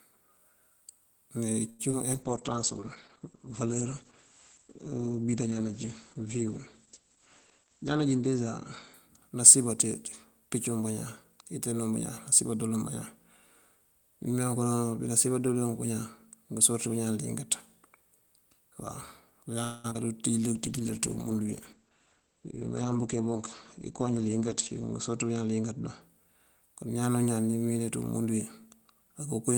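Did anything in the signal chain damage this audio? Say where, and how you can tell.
Yes, the damage sits in the network and receive side of a call, with the codec also forced down in quality.

Short stall from a late packet, in the network and jitter buffer, at 1.69 to 1.81 s: the sound is held for about 96 ms with a slight buzz, then resumes where it stopped. On a spectrogram the last harmonics smear horizontally. The waveform shows a repetitive stretched stretch, and nothing is missing.

Short concealed packet loss, network stage, at 1.91 to 1.95 s and twice back to back at 19.90 to 19.97 s: brief smears or wobbles where 20 ms and then 40 ms at each of the back-to-back spots of audio never arrived. The decoder extrapolated the last sound and crossfaded back. Each spot shows as a short blurred patch with a discontinuity.

Call bitrate drop, codec stage, at 2.14 to 9.26 s and 20.55 to 26.27 s: the encoder fell from 40 to 12 kbps, and the sound turns muffled and rough. 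On a spectrogram everything above 8 kHz vanishes abruptly, a flat ceiling replacing content up to 20 kHz, then returns.

Jitter buffer speed-up, receive buffer stage, at 7.51 to 8.35 s and 21.76 to 23.17 s: the audio runs about 10% fast at unchanged pitch and sounds hurried. Roughly a tenth of a second and about 150 ms were trimmed as pitch-period slices. Harmonic spacing stays constant while events bunch closer together.

Call audio freeze, network stage, at 19.64 to 19.86 s: the sound stops progressing for about 203 ms and is replaced by a fading buzz or hiss, then carries on from the same point. The likely cause is packets held up in transit. The waveform shows a decaying, repetitive stretch with no silence.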